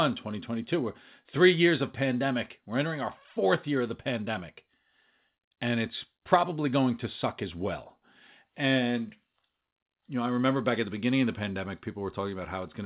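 Nothing faulty in this speech; the band stops at 4 kHz, which points to a WebRTC call path running narrowband G.711 mu-law at 64 kbps, and that ceiling is normal for such a path.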